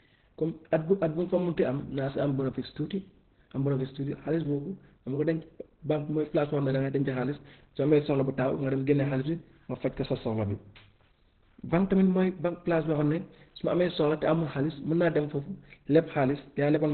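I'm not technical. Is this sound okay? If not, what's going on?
No. Opus compression, throughout: the speech sounds muffled and hoarse, with nothing above 4.3 kHz, likely because heavy squeezing switched the codec to its narrow speech mode.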